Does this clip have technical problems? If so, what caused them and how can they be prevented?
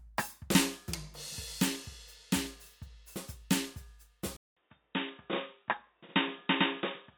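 Yes. At 4.37 s the music cuts out for 200 ms, then runs to the end dull and band-limited, with nothing above 3.8 kHz and a faint new hiss. The likely cause is an input switched to a poorer device with a narrower band. Locking recording to one fixed input device prevents this.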